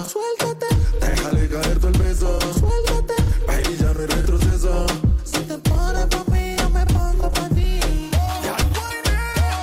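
Nothing technical stands out in this audio; there's no fault to point to here.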